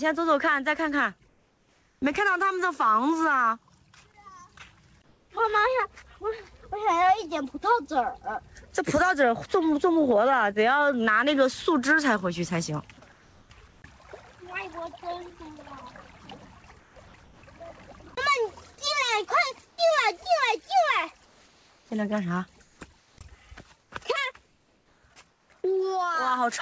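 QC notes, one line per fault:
1.28–2.02 s, 5.04–5.30 s, 13.00–13.82 s, 19.68–19.78 s, 21.26–25.50 s, comfort noise in place of the background: during pauses the real background, sitting about 35–41 dB below the loud parts, turns into a smooth, detail-free hiss, about 2 dB quieter at 1.28 s, level at 5.04 s and about 4 dB quieter at 19.68 s. This is likely discontinuous transmission filling silence with synthetic noise.
13.00 s, sound dropped by the voice detector: a brief bit of quiet sound, about 10 ms, vanishes into steady noise right where the comfort-noise stretch begins. The likely cause is the sender's detector mistaking that sound for background and cutting off early. This is a single loss, unlike repeated chopping.
16.80–18.12 s, sound chopped by the voice detector: about 380 ms of this stretch is replaced in two or more pieces, so soft edges drop out. This is likely a detector toggling on and off repeatedly rather than making one clean cut.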